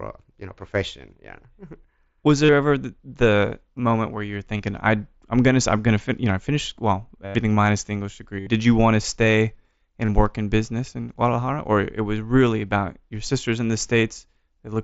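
Speech with five short buzzy, held-tone patches, each with a small warble where the real audio resumes: 2.45–2.49 s (38 ms), 4.57–4.60 s (23 ms), 7.26–7.35 s (90 ms), 8.40–8.47 s (68 ms) and 10.05–10.09 s (30 ms). This is concealed Bluetooth headset packet loss. Runs of lost voice packets were filled by repeating the best-matching recent stretch of waveform. The mSBC headset codec carrying it passes wideband speech with light codec damage.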